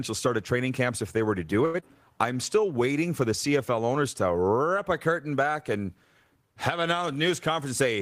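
From 1.65 to 1.76 s the speech hangs on one sound, held about 86 ms too long with a faint buzz or dip, then resumes with nothing lost. This is a short stall from a late packet: the jitter buffer ran dry, so the receiver stretched the last sound until the packet arrived.

Just after, from 1.80 to 1.84 s, a brief smear or wobble is audible. This is short concealed packet loss. About 60 ms never reached the decoder in time. Roughly 19 ms of it was covered by extending the previous sound before blending back, and the delay shrank by around 40 ms.

From 2.32 to 2.66 s the speech drags at about 90% speed with unchanged pitch, drawn out. This is a jitter buffer slow-down: to rebuild its reserve, the receiver repeated single pitch periods or bits of pauses, adding 40 ms to the stretch.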